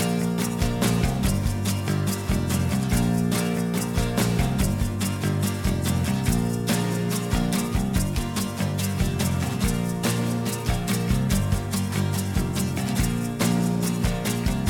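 No technical faults are audible anywhere in the audio.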